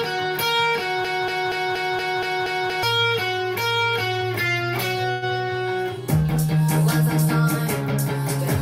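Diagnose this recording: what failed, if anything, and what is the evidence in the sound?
Broken-record loop, 1.05 to 2.83 s: a 0.24 s fragment repeats exactly eight times, back to back. This is a playback or streaming-stage failure, likely a stalled player or stream resending its last held fragment, so the audio due in that span never arrives.

Call audio freeze, 5.11 to 5.27 s: the sound is stretched into a fading buzz for about 106 ms without dropping to silence, then resumes where it stopped with nothing lost. The network stage likely delayed packets, and the jitter buffer ran dry and concealed the wait.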